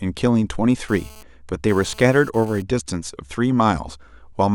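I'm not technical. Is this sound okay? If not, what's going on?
No. From 0.89 to 2.62 s a harsh, raspy buzz cuts in and out behind the speech. That's GSM phone buzz: a nearby mobile phone sending data, its radio bursts picked up by the audio equipment.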